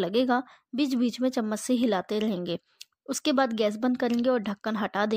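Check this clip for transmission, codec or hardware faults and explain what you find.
No faults can be heard anywhere in this speech. There is nothing here that calls for further explanation.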